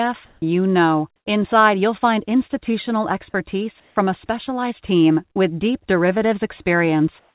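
A speech recording carried over a narrowband call path, with nothing above 4 kHz (consistent with G.711 at 64 kbps). Three pauses, at 0.26–0.42 s, 3.8–3.96 s and 7.2–7.35 s, carry comfort noise in place of the background, likely from discontinuous transmission. For about 150–160 ms each, the natural background becomes a flat, textureless hiss that is about 5 dB louder, about 3 dB quieter and about 9 dB louder than the background around it. On a spectrogram these show as smooth, even-toned blocks with abrupt level steps at their edges. At 5.32–5.38 s, a short concealed packet loss replaced about 36 ms with extrapolated audio, heard as a brief smear. The waveform shows a short stretch of continued audio that fades back into the real signal.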